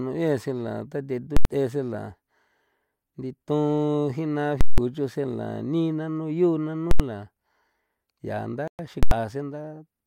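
At 1.37 to 1.45 s, 4.61 to 4.78 s and 6.91 to 7.00 s, the speech gives way to a very loud pop, a short gap with no sound, then a second pop. This is invalid numbers at full scale. A calculation went infinite or undefined, so each block was pinned at maximum level. The 85 ms events fit a 4096-sample block and the 171 ms one an 8192-sample block. At 8.68 s the audio drops to silence for 114 ms and then resumes, likely a Bluetooth stall in which delayed packets emptied the headphones' buffer. The same double pop returns from 9.03 to 9.11 s.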